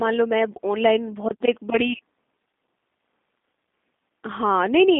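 Throughout, the speech sounds narrow, rough and slightly synthetic, with nothing above 3.7 kHz: the G.729 codec, rebuilt at what fits 8 kbit/s from a modelled vocal tract and pitch.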